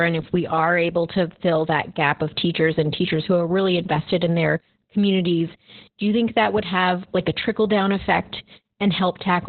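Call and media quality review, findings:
Opus voice compression, throughout. Speech muffled, hoarse, slightly robotic. Nothing above about 4.2 kHz. Narrowband SILK mode. Coarse excitation coding roughens the voice. Heavy codec damage. The sound points to a very low bitrate, around 8 kbps. Encoder narrowed the band to save bits.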